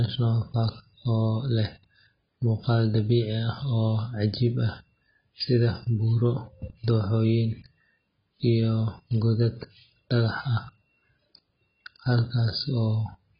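From start to finish, the speech has nothing above 5.2 kHz, sounding dull and smeared, with a warbling, fizzy texture on sibilants and held sounds. The likely cause is heavy AAC compression, AAC-LC at a rate near 16 kbps, lowering the cut-off.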